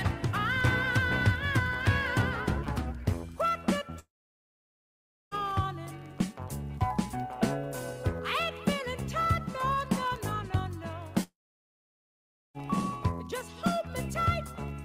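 From 3.99 to 5.34 s and again from 11.23 to 12.57 s the sound gives way to a brief fading buzz and then about 1.2 s of near-silence, with roughly 1.3 s of material skipped each time. It resumes further on, which points to a likely long network dropout. On a spectrogram each gap shows a short smeared tail, then a dark band. The waveform collapses to a flat line before the audio abruptly returns.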